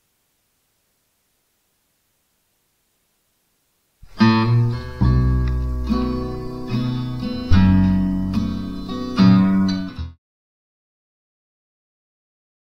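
At 7.51 s a supply changed state on a live input, and the voltage step passed through the coupling capacitors. The result is a phantom power thump: a deep thud that decays over about 50 ms and is gone by 7.73 s, before the smooth fade out that ends at 10.19 s.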